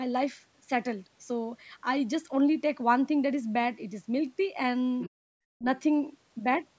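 From 5.01 to 5.1 s a faint second voice sits about 15 dB under the main speech, likely the other side's voice leaking through because the echo canceller left some loudspeaker sound in the microphone. On a spectrogram it shows as weak, separate harmonic traces under the stronger ones.

Right after, from 5.1 to 5.28 s, the background is gated by the echo canceller. It clamps the microphone by about 40 dB for roughly 200 ms, so the room tone drops out and then comes back. The waveform flattens almost to silence, and the spectrogram shows a dark vertical gap across the band, which stops at 8 kHz as the call path does throughout.

From 5.56 to 5.65 s the talker's own speech dips by around 40 dB for about a tenth of a second. This fits the pattern of speech suppressed in double talk, when both sides speak at once and the canceller turns both down. The waveform shows a sudden notch in the speech envelope, and the harmonics on the spectrogram break off briefly.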